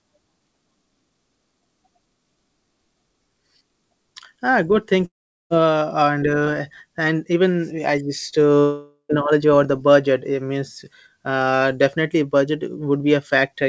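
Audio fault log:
5.06–5.53 s and 8.59–9.12 s, long network dropout: most likely, a stretch of packets never arrived, losing about 450 ms and 510 ms of the G.722 call audio, whose band stops at 8 kHz. Concealment stretches the last sound into a fading buzz, leaving about 410 ms of near-silence in the first gap and about 90 ms in the second before the sound resumes with that stretch missing.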